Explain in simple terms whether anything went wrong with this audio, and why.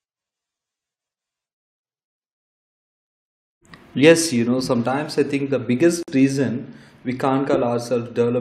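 At about 6.03 seconds, right after "sometimes I think the", the speech drops out for roughly 51 milliseconds and then picks up at "reason we" exactly where it left off. That's a gap at a join of encoded pieces. The audio was compressed in separate chunks and stuck back together, but the little stretch of silence each chunk gets at its edges was never trimmed. You get a tiny hole with blurred edges.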